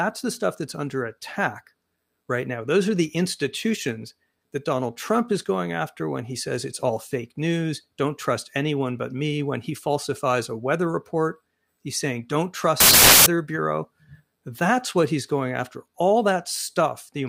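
From 12.80 to 13.26 s the reader assembles samples from the wrong bytes, promoting noisy low bits to the top, so the speech becomes loud, harsh broadband noise.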